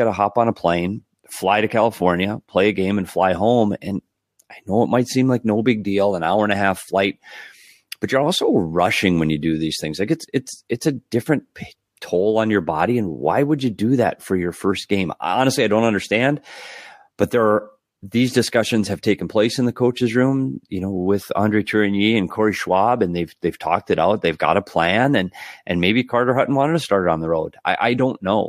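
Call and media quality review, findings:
Corrupt frame decoded, speech: three brief blips at 13.59 s (between "why would" and "you do that for"), 17.43–17.45 s (before "are these discussions have"), and 26.87 s (between "wanted to" and "it on the"). Each is roughly one damaged codec frame: flipped bits made the decoder put energy at wrong frequencies. The middle one is loudest, around -20 dBFS, and the last is faint.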